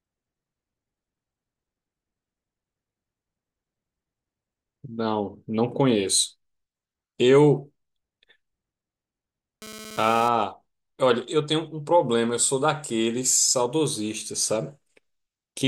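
A speech recording with one fault: GSM phone buzz. From 9.62 to 10.29 s a hard, raspy buzz cuts in at about 217 Hz. It carries a dense stack of harmonics and has no relation to the speech. It sits about 17 dB below the voice. A nearby 2G phone is transmitting in short radio bursts, and the audio circuitry rectifies them into sound. The buzz is brief rather than continuous, which fits a data transfer, not a call.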